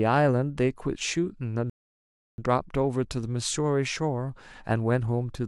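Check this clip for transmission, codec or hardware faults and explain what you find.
One transmission fault is present. From 1.70 s to 2.38 s there is a rebuffering stall: playback exhausted its downloaded audio and paused until more data arrived. The speech drops to silence for about 0.68 s, then continues exactly where it stopped, with nothing missing but extra time inserted.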